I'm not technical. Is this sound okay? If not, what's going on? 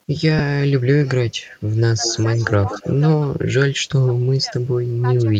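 No. Around 0.39 s there is a tiny smeared blip where one short chunk of sound, about 7.5 ms, went missing. These are lost LE Audio frames: the Bluetooth link dropped a piece and the decoder patched it over, rather than the sound simply cutting out.

At 1.05 s, 1.77 s and from 2.04 to 3.0 s, a faint delayed copy of the voice follows about 0.18 s behind. That is likely an echo leak, where a loudspeaker's sound got back into a microphone. It is a repeat of the voice, not noise.

At 2.65 s, 3.08 s, 3.33 to 3.46 s and 3.68 to 4.58 s, the voice dips and at its worst almost vanishes. This is speech suppressed in double talk, likely while both sides spoke at once. The voice itself gets quieter, unlike the added copy in the echo.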